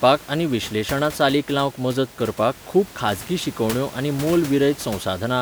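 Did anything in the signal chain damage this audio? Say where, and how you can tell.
No, nothing in the chain seems to have touched this speech, and the only thing under it is a bit of room noise about 17 dB down, which was there in the space when it was recorded rather than anything the equipment did.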